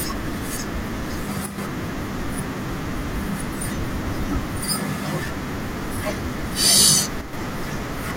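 Speech clip where one stereo channel likely drops out briefly, at 1.46 to 1.58 s and 7.21 to 7.33 s, so the mono sum abruptly falls by about 6 dB for roughly 0.12 s each time.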